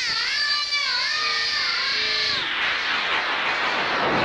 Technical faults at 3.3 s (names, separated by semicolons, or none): none